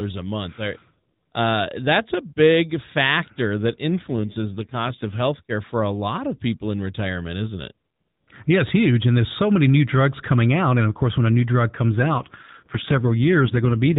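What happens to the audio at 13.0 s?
At 13.0 s the audio is inside an AMR rate drop that begins at 11.91 s, just after "when a new drug", and runs to the end of the clip. The network has pushed the codec down from its normal narrowband rate, which sounds consistent with about 5.9 kbps, so the voice turns rougher and more synthetic with no gap and no change in bandwidth.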